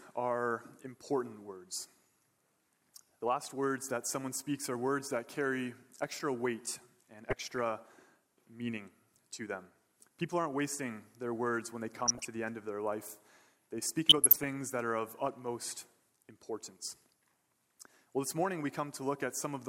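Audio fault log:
7.30 to 7.59 s, 11.95 to 12.25 s and 14.09 to 14.46 s, DAB burbling: in each burst, weak reception lets bit errors at a rate of a few tenths of a percent slip past error correction into the MP2 audio data. Corrupted samples put short blips of noise into individual sub-bands, and corrupted scale factors throw sub-bands to the wrong level for up to a frame. Across roughly a dozen consecutive frames, this produces about a third of a second of burbling laid over the audio.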